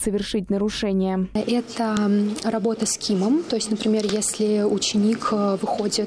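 At 1.97 s there's a sharp, loud click, and the same snap comes back at 4.09 s. That's a file header played as audio: the clip looks like separate WAV pieces joined end to end without stripping their headers, so a few dozen bytes of header data get read as samples. Each click marks where a new piece begins, and it cuts through whatever the sound is doing at that instant.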